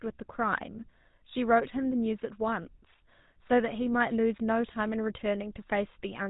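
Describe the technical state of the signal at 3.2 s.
At 3.2 s the speech carries GSM full-rate codec damage, present throughout. Pulse-driven vocal-tract modelling makes it buzzy and gravelly. Nothing passes above 3.8 kHz.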